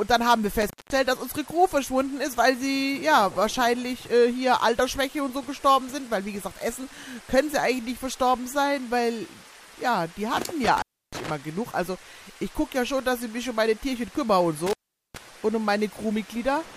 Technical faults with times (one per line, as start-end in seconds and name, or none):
0.61-0.98 intermittent contact
10.64-11.30 intermittent contact
14.66-15.17 intermittent contact